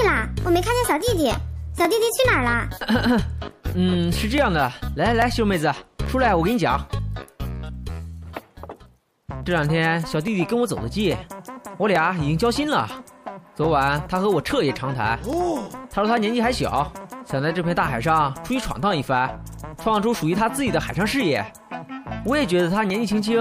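From 0.17 s to 22.9 s there's a regular click about every 0.84 s, likely clock drift buffer slips, with a few dozen samples dropped or repeated each time.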